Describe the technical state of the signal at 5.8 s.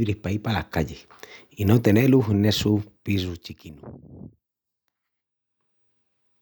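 At 5.8 s the signal is intact, with no audible fault at that moment.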